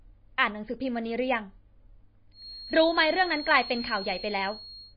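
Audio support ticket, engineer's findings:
Watery, swirly speech throughout, sibilants chirpy and metallic, consonant attacks smeared, nothing above 5.1 kHz. Likely MP3 compression at a starved bitrate, fitting about 24 kbps: encoder cuts treble at a fixed point, weak spectral lines flicker frame to frame.

Thin steady whistle at 4.3 kHz from 2.31 s to the end, swelling and fading slowly, well below the speech. Likely a feedback whistle: speaker-to-mic loop sitting just at the edge of feedback, one tone sustaining without running away.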